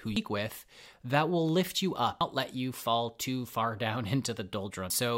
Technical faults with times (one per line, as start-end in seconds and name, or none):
0.16 damaged data in a compressed stream
2.21 damaged data in a compressed stream
4.90 damaged data in a compressed stream